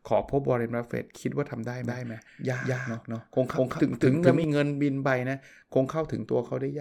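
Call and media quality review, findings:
Doubled audio track, 1.84 to 4.44 s: speech repeated at roughly equal level, about a fifth of a second late, starting and stopping abruptly. Likely a second capture path or misaligned edit. Unlike echo, the copy is full-band, undecayed, without room colour.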